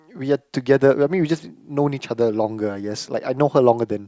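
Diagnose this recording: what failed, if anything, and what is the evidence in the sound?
Nothing in this speech recording points to a failure at any stage of the chain. Listening through, no fault shows itself anywhere in the sound.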